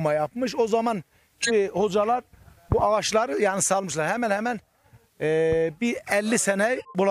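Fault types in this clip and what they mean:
corrupt frame decoded: a loud glitch at 1.42 s and a fainter one at 6.76 s, from damaged compressed frames decoded with misread values.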